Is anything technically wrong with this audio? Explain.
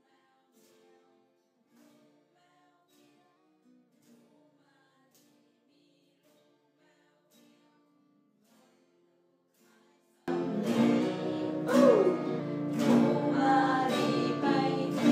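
Yes, there are two faults. From 0.0 to 10.28 s, the sound is nearly gone, about 38 dB down, leaving a faint residue. This is likely one channel inverted, which cancels shared content when the channels are summed. From 11.00 to 12.40 s, the audio runs 5.84% fast and about 98 cents sharp, close to a semitone, then snaps back. This is likely a drift correction step retiming playback to rebalance a buffer.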